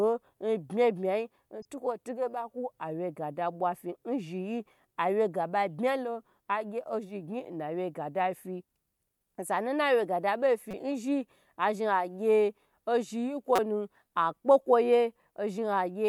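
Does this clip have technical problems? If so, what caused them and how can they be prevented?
Yes. There are three brief bursts from corrupt frames decoded: at 1.62 to 1.65 s, just before "tige ba"; at 10.71 to 10.74 s, right after "osanu naciye ga da"; and at 13.56 to 13.59 s. Flipped bits made the decoder put energy at the wrong frequencies. The first is faint and spans a few frames. The last is loud. Error checking on the stream, with damaged frames concealed rather than decoded, would prevent this.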